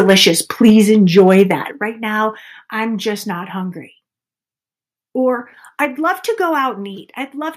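From 0.00 to 0.29 s, 0.65 to 0.70 s and 1.17 to 1.52 s the loudest syllables carry a harsh, crackling edge, most likely microphone overload. Input gain set too high drives peaks about 2 to 4 dB past the converter's ceiling, so their tops are sliced off. On the waveform the peaks flatten against the converter's limit, with the flattening densest around 0.65 s. On a spectrogram the clipping shows as bright vertical smears of broadband energy above the speech harmonics.

At 0.70 s, right after the second distorted burst, the whole signal, speech and background alike, drops by about 3 dB in a single step. It drops again by about 8 dB at 1.71 s and by about 2 dB at 5.85 s. This is likely the microphone volume being stepped down by call software reacting to the clipping and cutting the device's input gain. On the waveform the envelope falls abruptly at each point, most sharply at 1.71 s. On a spectrogram the noise floor dims at the same instants.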